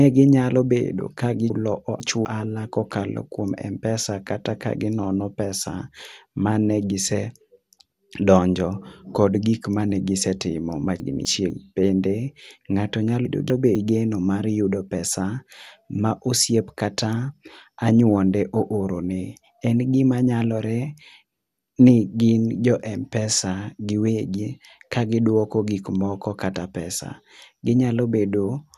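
The whole clip sounds dull and gritty. Nothing is heard above about 12.2 kHz. The damage is plainly audible: a gurgling, granular edge sits on the speech, and the top end seems to come and go. This is likely MP2 compression, at a bit budget that fits about 80 kbps. With too few bits, the upper sub-bands are switched off. The bands flicker on and off, and those that remain are quantised coarsely.

From 1.5 to 2.25 s, the audio jumps. A 250 ms chunk plays two chunks late, after material that should follow it. Nothing is missing, but the order is wrong. There are hard joins, and the passage sounds jumbled. The chunks out of order return twice more, from 11.0 to 11.5 s and from 13.25 to 13.75 s. Each time, one 250 ms chunk is swapped with its neighbour. Each gives a brief garbled moment.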